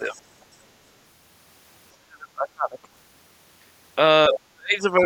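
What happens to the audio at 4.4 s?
Right around there the speech briefly sinks, a shallow dip of roughly 5 dB from 4.29 to 4.36 s. That's speech suppressed in double talk, likely the echo canceller ducking everything while both ends talked at once. Overlapping it, from 4.35 to 4.4 s, a faint scrap of the other side's voice leaks through, sitting about 10 dB under the talker, likely because the canceller didn't fully strip the loudspeaker playback out of the mic.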